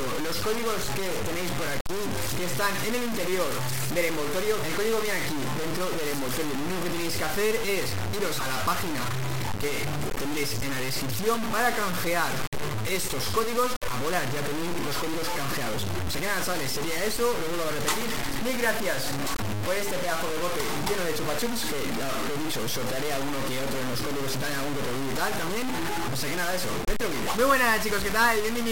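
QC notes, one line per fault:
Throughout, low bit depth without dither: about 3 bits, likely truncated, so grainy distortion tracks the sound; waveform shows coarse stair-steps, spectrogram broadband hash near signal level.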